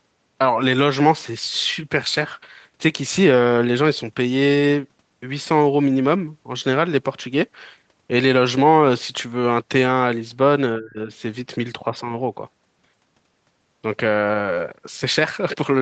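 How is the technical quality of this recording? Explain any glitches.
One glitch stands out, in a recording whose content stops near 8 kHz after passing through the call codec.

From 10.78 to 11.1 s the speech dips sharply, by about 25 dB. This is likely speech suppressed in double talk, with the echo canceller mistaking the speech for loudspeaker echo and attenuating it.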